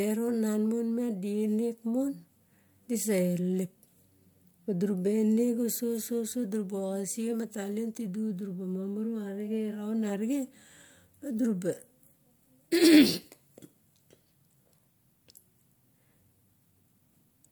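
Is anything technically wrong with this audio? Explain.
No, nothing technically wrong can be heard here.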